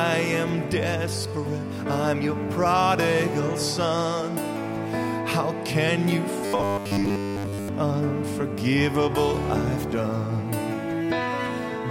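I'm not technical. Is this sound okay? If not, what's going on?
No. Robotic sound from repeated short buffers, 6.46 to 7.69 s: a rigid 100 Hz buzz, likely because audio arrived too slowly and one 10 ms slice kept repeating.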